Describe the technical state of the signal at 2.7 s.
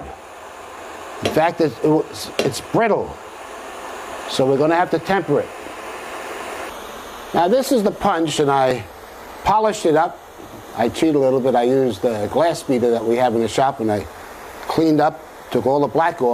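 At 2.74 to 2.77 s there is an overlap between stream segments. Two segments, which fits a 2-second segment length, claimed the same stretch of time. The player trimmed about 26 ms of real sound and the waveform jumps, heard as a click or tiny skip. Unlike a dropout, no silence is inserted; the audio simply lurches forward.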